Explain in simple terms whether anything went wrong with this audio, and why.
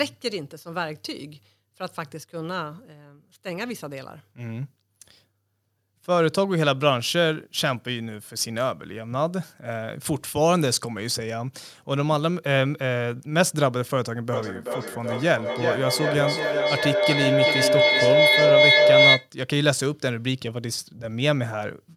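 Feedback howl from 14.32 to 19.31 s: two devices in the same room were on one call, so sound looped from microphone to speaker and back, growing louder each trip. It became a mid-pitched whistle, pulsing about two and a half times a second, that overpowered the speech.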